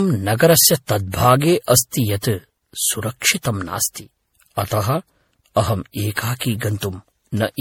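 Throughout, the speech sounds swirly, hollow and smeared, with blurred onsets. This is likely generation loss: MP3 encoding repeated around five times at what points to 64 kbit/s, each pass requantising on a shifted frame grid. A spectrogram shows patchy holes and nothing above 17.7 kHz.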